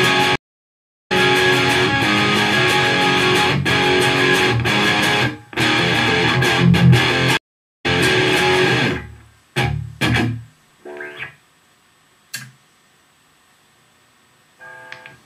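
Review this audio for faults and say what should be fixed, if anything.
Stream reconnects at 0.36–1.12 s and 7.37–7.86 s: the connection dropped, playback went silent, and a fresh decoder then resumed roughly 0.4 s further along. To prevent this, stabilise the network path and give the player enough buffering to ride out brief dropouts without reconnecting.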